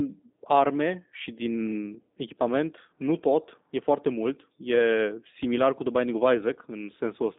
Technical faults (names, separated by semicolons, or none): G.729 codec